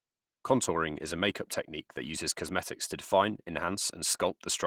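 Opus voice compression runs throughout: hybrid SILK and CELT coding, consistent with about 16 kbps, leaves the speech plainly hoarse and slightly robotic from the coarse excitation.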